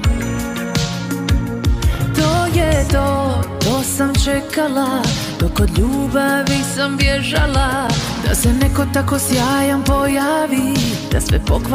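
From 4.21 to 5.49 s there's a burst of GSM signalling interference: a 2G phone close by was handshaking with the network, and the audio circuitry rectified its radio bursts into sound. You get that galloping dit-dit-dit rhythm of short buzzes, the buzz pitched at the 217 Hz burst rate. It sits roughly 20 dB under the main audio.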